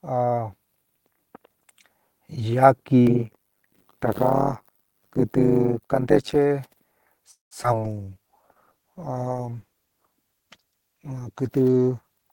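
From 3.07 s to 6.35 s there is an overlap-add ripple. The audio was split into windowed frames and rejoined with an overlap that does not sum to a constant gain. So the level swings once per frame. The swing is deep, about 60 dB. It repeats around a hundred times a second. The speech takes on a harsh, metallic buzz laid over it.

At 7.31 s a call audio freeze begins and lasts until 7.53 s. The receiver ran out of audio to play. It carried the last sound forward for about 196 ms, and most of that, around 150 ms, is silence. Nothing is lost. The speech simply resumes where it stopped, with a gap pushed into it. The likely cause is packets held up in transit until the jitter buffer emptied.

A skip ahead follows at 7.63 s to 7.66 s. Roughly 70 ms of speech is gone. Only about 9 ms of fill bridges the jump. The two sides are joined almost directly, so the sound lurches forward with a tiny seam. 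This pulls back some of the delay the freeze added, around 50 ms of it.

At 7.72 s there is short concealed packet loss, ending at 7.74 s. About 41 ms of audio never reached the decoder in time. The receiver blended across the hole rather than filling it with new sound. The result is a brief smear. It trims roughly another 40 ms of delay.

From 7.81 s to the end there is a call bitrate drop. The encoder rate falls from 32 kbps to 14 kbps and stays at that low rate throughout. With so few bits, the coding turns coarse. The upper frequencies are cut back. The speech sounds muffled and watery, with a rough texture that never recovers.

Inside that stretch, from 8.04 s to 8.74 s, there is a jitter buffer slow-down. The receiver repeated pitch periods and fragments of pauses to build a reserve. It added about 93 ms. Playback runs at 88 percent speed with the pitch unchanged. Sounds are drawn out, and the speech feels slightly dragged.

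Near the end, at 12.23 s to 12.30 s, there is a jitter buffer speed-up. The buffer held more audio than its target. So the receiver cut short pitch-period pieces, roughly 50 ms in all. For this instant playback runs at 190 percent speed. The pitch stays the same, but the speech sounds hurried.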